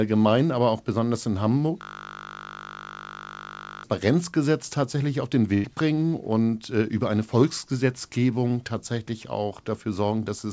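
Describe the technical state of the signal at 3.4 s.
A steady 50 Hz buzz replaces the speech from 1.82 to 3.84 s, just after "aber auch besonders in": a system hang loop replaying one 20 ms buffer.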